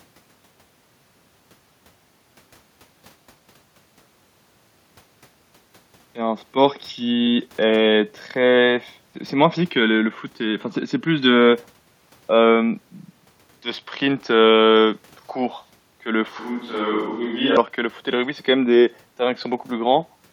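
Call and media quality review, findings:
16.39–17.57 s: sound abruptly goes roomy and hollow, thinner low end, about 5 dB quieter, room noise up to roughly 35 dB under the speech. Likely a switch to a distant microphone after the close mic's feed dropped; snaps back at 17.57.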